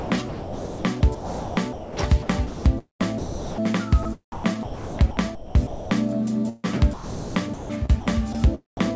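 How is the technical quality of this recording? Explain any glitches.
The quality is poor. Repeated gating gaps and one packet-loss dropout interrupt the audio, which came over a G.722 call path with nothing above 8 kHz.

Sound chopped by the voice detector happens from 0.0 to 1.97 s, 2.23 to 3.62 s, 4.32 to 5.91 s and 6.94 to 8.07 s. The sender's detector likely kept toggling transmission off, so stretches were swapped for comfort noise. The sound turns choppy.

Sound dropped by the voice detector occurs at 4.03 s, 8.33 s and 8.77 s. Each time, the detector likely misjudged quiet sound as background and halted sending for about 20 ms. The receiver inserted comfort noise, leaving a tiny hole of steady noise before the sound returns.

A burst of packet loss runs from 6.49 to 6.66 s. Roughly 140 ms of audio never arrived in time. The receiver stretched the last sound across the gap and faded it, and the sound then resumes further along with that section missing.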